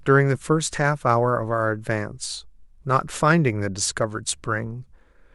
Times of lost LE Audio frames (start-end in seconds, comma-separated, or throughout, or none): none